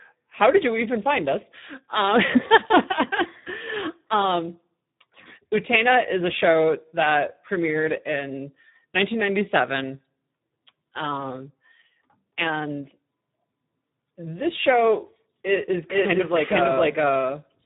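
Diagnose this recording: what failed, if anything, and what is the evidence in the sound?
The failure is at the codec stage. The speech passes through a Speex codec and sounds hoarse, noisy and partly robotic throughout, which fits a low setting around 8 kbps, where too few bits remain to describe the excitation. On a spectrogram everything stops at 3.8 kHz, a flat ceiling with nothing above it. Harmonics in the voiced parts look smeared and grainy, not cleanly striated, because the excitation is coarsely approximated.

From 15.48 s, right after "this show", a doubled audio track appears and runs to the end. A second, full-band copy of the speech arrives about half a second behind, roughly as loud as the original, and it begins abruptly with no decay or room colouring. On the waveform the envelope suddenly overlaps itself, and the spectrogram shows each syllable pattern repeated at a fixed offset. 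The likely cause is the audio being captured twice, once through a slower path, or an edit leaving two copies out of step.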